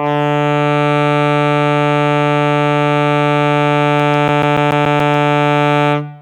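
CD scratch ticks run from 3.99 to 5.28 s in this music clip: ten regular clicks, close to eight per second, the longest around 10 ms. A blemish on the disc corrupts more data than error correction can repair on each rotation, so the player conceals or mutes those samples.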